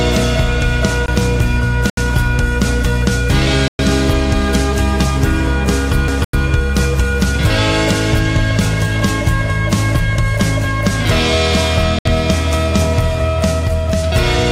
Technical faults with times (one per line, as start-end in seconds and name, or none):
1.06-1.08 CD skip
1.90-1.98 Bluetooth stall
3.68-3.79 Bluetooth stall
6.08 CD skip
6.24-6.33 Bluetooth stall
11.99-12.06 Bluetooth stall